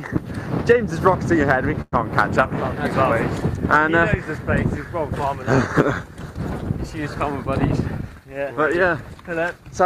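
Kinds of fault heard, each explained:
Call audio freeze: At 1.81 s the sound stalls and the last bit gets stretched into a fading buzz for about 108 ms, with a brief silence of about 10 ms, until 1.94 s. It then picks up where it left off, so nothing's lost, just delayed. Likely held-up packets draining the jitter buffer.
Jitter buffer speed-up: From 8.02 to 9.17 s the receiver trims tiny pitch-period slices over and over to shed the delay that built up, cutting about a tenth of a second. Playback runs at roughly 109% speed with unchanged pitch, so it sounds a bit rushed.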